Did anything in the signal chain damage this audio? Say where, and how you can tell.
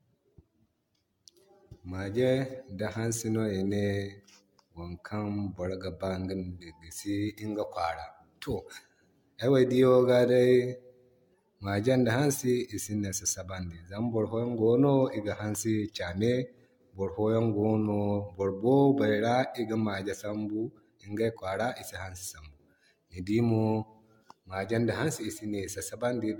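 Yes, at the codec stage: throughout the speech the sound is swirly, smeared and hollow, with blurred attacks and nothing above 17 kHz. This is generation loss, likely from around ten AAC encodes near 96 kbit/s, each re-quantising on a shifted frame grid.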